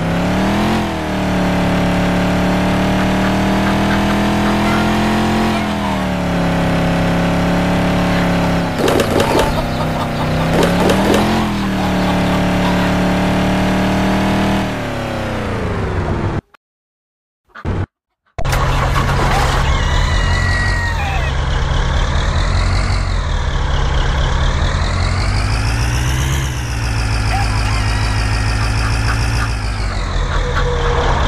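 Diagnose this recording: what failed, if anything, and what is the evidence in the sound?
Nothing in the chain seems to have failed here, as no stage from the wiring through to playback leaves any trace of trouble anywhere in the recording.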